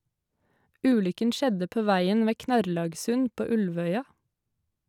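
No technical faults can be heard at any point in the speech, so there is nothing to describe in time order.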